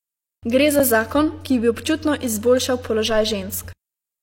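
At 0.79 s, just before "za zakon ki bi", a gap between stream segments cuts the speech for about 6 ms. Segment timestamps fail to meet, so the player fills the hole with silence, heard as a brief hard-edged dropout. The waveform flatlines abruptly, and a spectrogram shows a thin vertical blank stripe.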